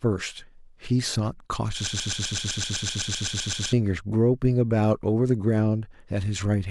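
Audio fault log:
1.87–3.73 s, broken-record loop: a 128 ms speech fragment repeats 15 times back to back, likely a stalled stream resending its last fragment; the speech in that span is lost.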